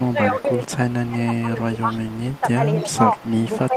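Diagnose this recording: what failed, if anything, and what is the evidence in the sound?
Echo leak, at the call-processing stage: a delayed copy of the speech trails by 268 ms at 0.00–0.07, 0.41–1.08, 1.76–2.40 and 2.80–3.68 s. It rises from about 30 dB below the speech to about 15 dB below by the end, likely a far-end loudspeaker echo the canceller didn't fully remove.

Speech suppressed in double talk, also in call processing: the talker dips by up to roughly 15 dB across 0.00–0.64, 1.07–1.92 and 2.41–3.76 s, overlapping the echo bursts. That's likely the canceller failing to separate talker from echo during overlap and ducking both.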